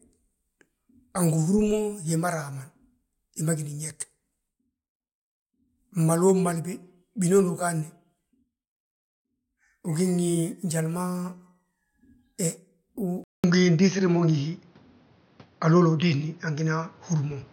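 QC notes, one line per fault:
13.24–17.52 s, input switched to a poorer device: after a gap of about 200 ms the speech turns dull and boxy, with nothing left above 6.5 kHz, a level shift of about 5 dB, and a new background noise roughly 35 dB below the speech, lasting to the end. The likely cause is the system changing its input mid-recording to a narrower-band microphone or headset call profile, which brings its own tone, gain and noise floor.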